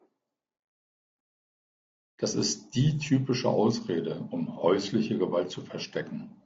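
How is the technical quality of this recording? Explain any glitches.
The technical quality is compromised throughout by audible low-delay AAC compression. The speech was likely passed through a low-delay AAC coder like those used on video calls, with a bit budget that fits about 32 kbps. Its low bitrate leaves too few bits to code each frame's roughly 500 frequency lines cleanly, so noise fills the gaps between the pitch harmonics across all 6 seconds. The speech sounds rough and grainy, and the top band is dulled or takes on a synthetic sheen.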